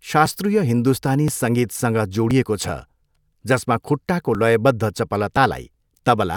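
Right from 0.26 s there's a steady tick in the speech that repeats every 1.02 s until about 5.4 s. That's periodic USB or driver dropouts: something keeps stalling the USB bus or the audio driver on a fixed schedule, and each time a few milliseconds of audio are simply skipped, not filled with silence. The waveform jumps ahead at each gap, which is why you hear a small click over the speech, spaced like clockwork, about seven of them in all.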